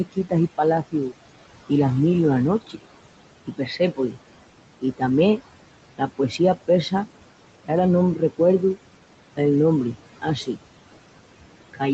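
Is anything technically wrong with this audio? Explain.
Yes. The speech carries two related faults, both from a noise suppressor.

Noise suppressor artifacts run through the whole clip. The room noise sits about 14 dB below the speech, and the suppressor pulls it down by about 18 dB wherever it judges a band to be steady noise, frame by frame. The background sinks in the gaps and comes back up under the talking. Unlike a plain gate, which switches the whole signal, this works per frequency band, so it doesn't act as a clean on-off pump.

Speech cut by the noise suppressor happens three times: 0.11 to 0.32 s, 5.98 to 6.4 s, and 8.16 to 8.4 s, with the deepest drops about 16, 13 and 17 dB. In each window the suppressor mistook part of the speech for noise and turned it down with the background, so softer sounds come out swallowed or faint. Within each window the affected stretch totals roughly a tenth to a sixth of a second. 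This differs from a dropout or packet loss: the audio doesn't go silent or glitch, it just gets turned down. The missing content above 8 kHz comes from the call path's bandwidth and isn't part of this.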